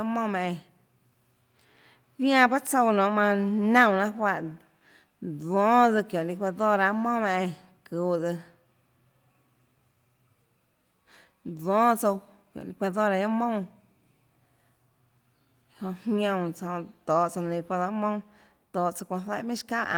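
No technical faults can be heard in the speech recording at any point, and the signal stays steady and intact throughout.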